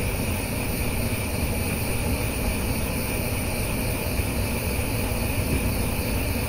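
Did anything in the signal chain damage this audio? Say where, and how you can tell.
No, nothing in the signal chain damaged this audio.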